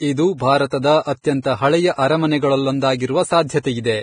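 Throughout, the speech loses everything above 9.7 kHz, and its highs turn to grainy hiss rather than simply dull, likely heavy Vorbis compression near 23 kbps.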